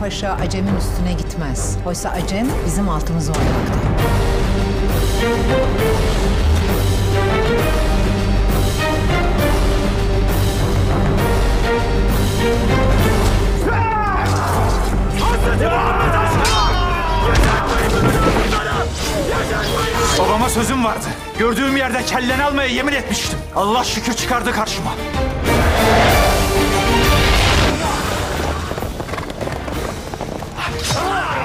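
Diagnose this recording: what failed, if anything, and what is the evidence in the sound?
Nothing failed, and the sound gives no evidence of a fault at any stage.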